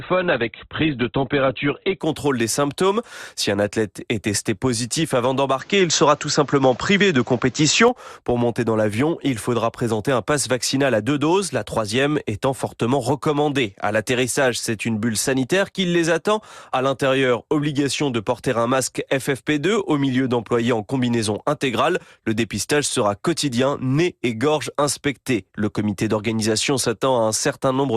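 A speech clip with two technical faults. From 0.0 to 2.0 s the sound is dull, with nothing above 4.4 kHz, and codec artefacts are strong. This is an adaptive stream starting at a low bitrate. The player began on a cheap version, which fits an Opus stream near 12 kbit/s, to start quickly. At 2.0 s it moves to a better version, one that points to about 64 kbit/s. The treble returns at once, with no gap. From 5.59 to 7.88 s the tone narrows again, with nothing above 7.9 kHz. The change is instant, with no silence at either edge. The level shifts by around 5 dB. A new background noise sits roughly 30 dB below the speech. The likely cause is the input switched to a poorer device, such as another microphone or a headset's call profile, before switching back.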